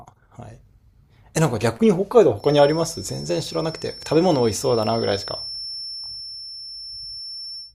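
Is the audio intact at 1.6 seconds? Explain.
Yes, the audio is intact at 1.6 seconds, with no dropout, click, distortion or other fault audible at that point.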